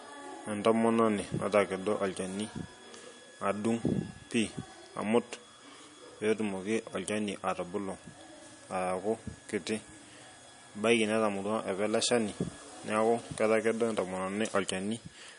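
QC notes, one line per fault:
Throughout, MP3 compression: the speech has no content above about 10.6 kHz and carries a plainly audible watery, swirling texture. This is likely the work of an MP3 encoder starved of bits, which fits a low bitrate around 40 kbps. With too few bits to go round, the encoder discards the top of the spectrum at a fixed cut-off and drops weak frequency components that then flicker in and out between frames, smearing the sound.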